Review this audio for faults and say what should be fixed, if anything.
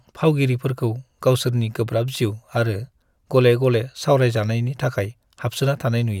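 No faults can be heard anywhere in this speech recording. Nothing needs to be fixed.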